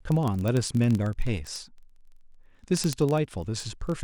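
From 0.12 s to 4.03 s you get word clock ticks, about fifty a second, a couple of hundred in total. The receiver's clock isn't locked to the sender's and drifts by roughly a thousand ppm, so every slip drops or repeats one sample.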